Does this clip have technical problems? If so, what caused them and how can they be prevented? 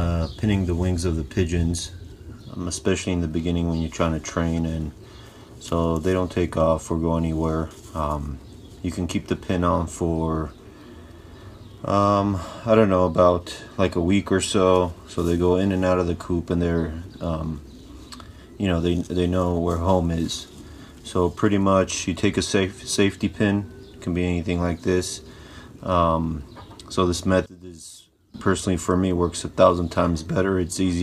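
Yes. From 27.46 to 28.34 s the sound drops by about 18 dB, leaving only a residue. That's likely one channel inverted: shared content cancels when the two channels are summed to mono. Check polarity on both channels before any mono fold-down.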